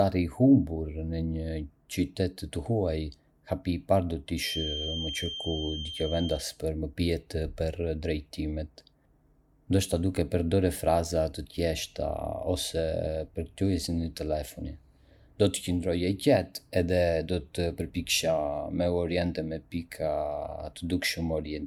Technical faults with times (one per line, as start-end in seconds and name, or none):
4.33-6.48 feedback whistle